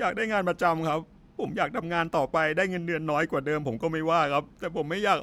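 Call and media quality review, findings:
No audible faults in the signal path for the whole of the speech clip; level, timing and continuity hold steady throughout.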